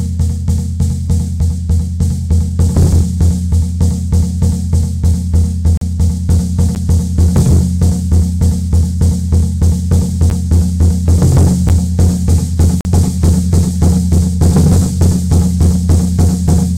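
Everyday sound recording with a block of digital silence recurring: hard cuts to silence at 5.77 to 5.81 s and 12.81 to 12.85 s (about 40 ms each), plus ticks at 6.75, 10.3 and 11.69 s. The short ones fit a 512-sample buffer going unfilled, and the longer one at 12.81 s a 2048-sample block.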